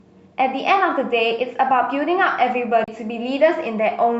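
At 2.84 s the playback laser lost its track on the disc's spiral and landed on another turn. This is a CD skip. The player mutes briefly, for roughly 40 ms, before resuming at 2.88 s from the new position. The speech therefore breaks with a short silence, then picks up from a different point, so the flow of the speech is abruptly displaced rather than continuing where it stopped.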